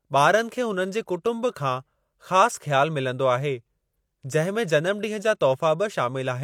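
No dropouts, clicks, distortion or other technical faults can be heard anywhere in the recording.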